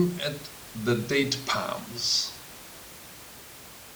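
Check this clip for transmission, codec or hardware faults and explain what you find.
No transmission, codec or hardware problems can be heard in the speech signal, and the only background sound is the room's own ambient noise, sitting about 17 dB below the speech as part of the original recording.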